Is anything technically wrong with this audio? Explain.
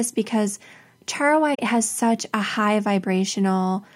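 Yes. From 1.54 to 1.59 s the speech has an AAC frame loss with muting: about 43 ms, which fits two lost frames, decoded as silence. Overlapping windows fade the edges, so unlike a hard dropout, the gap is a soft-edged hole.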